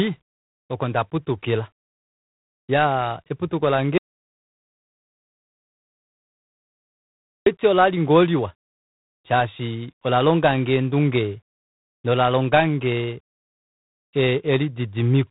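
Throughout, the speech carries G.726 ADPCM damage. Coarse prediction steps add a rasping hiss that rides its level, which fits 24 kbit/s. Nothing passes above 3.9 kHz.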